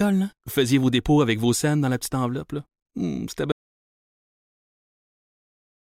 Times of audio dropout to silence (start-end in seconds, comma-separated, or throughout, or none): 3.52-5.87